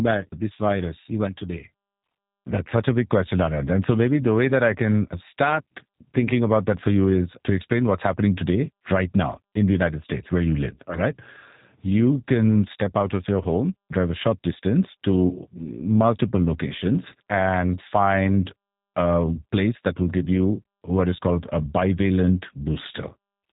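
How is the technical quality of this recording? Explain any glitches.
Quality is limited by plainly audible low-bitrate voice coding across the whole recording.

The G.729 codec damage is plainly audible from start to end. Nothing above about 3.8 kHz survives, so the speech sounds narrow and muffled. The codec rebuilds each short frame from a vocal tract filter, a pitch predictor and a few pulses. That model loses fine detail, leaving a rough, slightly synthetic texture. The sound points to G.729A at around 8 kbit/s.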